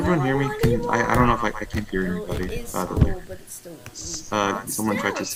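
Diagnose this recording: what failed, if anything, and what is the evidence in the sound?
Nothing failed in this recording, and the sound gives no evidence of any fault.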